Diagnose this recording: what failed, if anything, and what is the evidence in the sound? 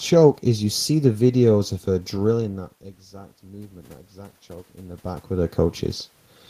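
The fault is in call processing: automatic gain rising from 2.37 s to 5.86 s. After the talker moves away around 2 s and the input falls by about 20 dB, the gain control slowly adds about 5 dB. Voice and room noise swell together, and the waveform envelope and noise floor ramp upward.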